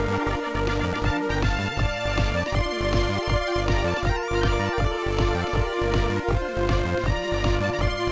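Nothing here goes wrong at any point; there are no glitches, dropouts or other technical faults to report anywhere in the audio.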